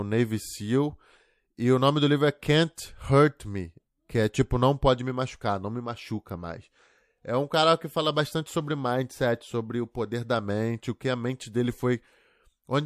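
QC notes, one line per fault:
2.76 s, pre-echo: Just after "nome do livro é", a brief hiss of about 11 dB leads a sharp attack by 19 ms. The codec spread its noise across a long window, which fits about 36 ms with no switch to short blocks. The attack sounds smeared.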